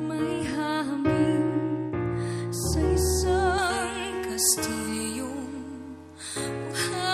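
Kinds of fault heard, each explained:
Pre-emphasis left on: a treble boost applied ahead of storage or transmission was never undone by the matching de-emphasis, so high frequencies reach the listener far too strong. From about 3.58 s to the end, the top end rises to roughly 11 dB above the 1 kHz level by 10 kHz, a tilt that fits a J.17 curve. The sound turns thin, bright and hissy, with sibilant edges pushed forward.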